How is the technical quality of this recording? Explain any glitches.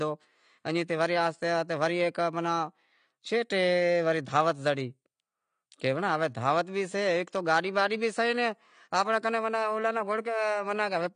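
The recording is held back by AAC compression that runs the whole way through. Nothing comes through above 9.9 kHz, and the speech sounds dull and smeared with a fizzy, warbly edge on sibilants, likely from an AAC-LC encoder starved of bits, which fits a rate around 32 kbps.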